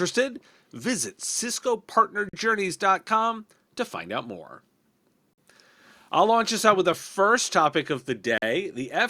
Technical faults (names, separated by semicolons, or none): gap between chunks